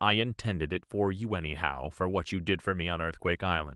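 No faults; the speech carries only the ordinary coding character of a call path, with the top end stopping near 12 kHz, which fits an Opus codec at that bandwidth.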